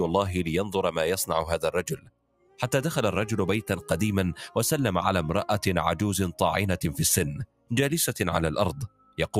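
Throughout the clip, a noise suppressor designed for speech is left running on sound that isn't speech. It treats sustained tones, ambience and decays as noise, so the level swings by roughly 10 dB as it clamps and releases. Sharp onsets pass while held material sinks, giving a fluttering, pumping thinness. Unlike a compressor's pumping, the ducking follows steadiness rather than loudness, with loud attacks left intact and quiet tails pulled down.

Within that, three stretches are cut harder by the noise suppressor. The first runs from 1.90 to 2.59 s, the second from 7.46 to 7.71 s, and the third from 8.88 to 9.19 s. They sink by about 18 dB, about 18 dB and about 17 dB. Each sounds like the sustained part being swallowed, with decays chopped short, yet it is not a dropout, because the sound thins rather than going silent.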